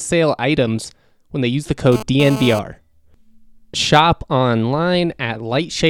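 A nearby 2G handset, in a burst of data transfer, coupled its radio pulses into the audio circuit, which rectified them into GSM phone buzz from 1.92 to 2.59 s, just after "when they use the". The pulses repeat at 216.7 Hz, so a hard, raspy buzz rich in harmonics sits about 10 dB below the speech, unrelated to it, appearing abruptly and dropping out again after about two thirds of a second.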